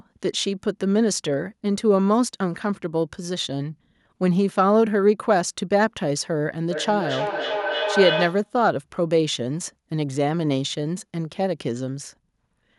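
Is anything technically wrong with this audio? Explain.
Yes. From 6.71 to 8.55 s there is feedback echo between two devices. A second device replays the audio, its microphone picks it up again, and neither echo canceller removes the other's playback. Thin, ringing repeats arrive roughly every 300 ms, peaking about 4 dB below the speech. On a spectrogram they appear as evenly spaced copies of each harmonic band, and on the waveform as a regular train of bursts.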